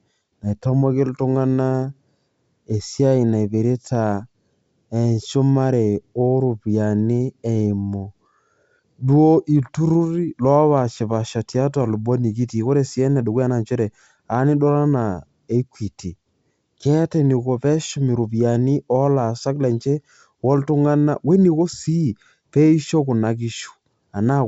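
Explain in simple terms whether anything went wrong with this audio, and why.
Nothing went wrong here: the speech comes across as ordinary wideband phone audio, the kind G.722 coding produces, with at most a faint trace of that coding and nothing that stands out as a problem.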